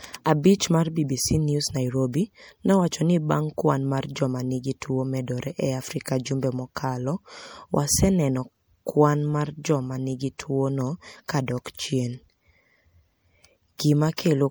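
MP3 compression runs through the whole speech clip, with plainly audible damage that likely comes from an MP3 encoder at a bitrate around 64 kbps. Short of bits, it drops weak frequency lines frame by frame, giving a watery, swirly texture, though content still reaches up to about 21.5 kHz.

Pre-echo appears at 6.75 s, 10.38 s and 11.28 s. Quantisation noise sized for a sharp attack spreads across its transform block, so a short hiss leads each onset by 16 ms, 13 ms and 13 ms, and the attacks sound softened.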